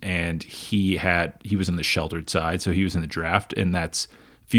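A short speech recording, with no technical fault to be heard anywhere in it. There is nothing here to place at a particular time or to trace back to a cause.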